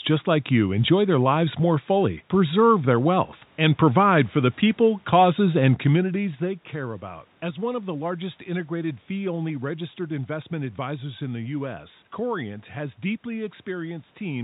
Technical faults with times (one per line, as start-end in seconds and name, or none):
none